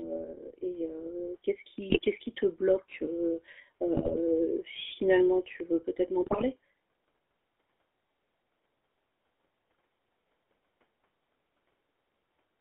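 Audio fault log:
Throughout: GSM full-rate codec. The speech is squeezed through a 13 kbps vocal-tract model driven by sparse, regularly spaced pulses, and the line passes only about 300 Hz to 3.5 kHz, so it sounds muffled and buzzy with a gravelly roughness that is plainly audible.
1.90–2.02 s, 3.97–4.18 s (just before "finalement tu veux"), 6.22–6.44 s: GSM bit errors. Corrupted bits reach the decoder, warping the filter, pitch and gain values for short stretches, so each burst breaks into squawks, pops and gargling. The damage fits a bit error rate around 2.5 percent.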